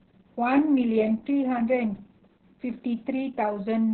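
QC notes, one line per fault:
Throughout, Opus voice compression: nothing survives above about 4.3 kHz, so the speech sounds narrowband, muffled and phone-like. The excitation is coded very coarsely, leaving the voice hoarse and slightly robotic, with heavy codec damage across the clip. This sound points to the SILK linear-prediction coder working alone, at a bitrate around 6 kbps with long 60 ms frames, where too few bits remain to describe the fine harmonic detail.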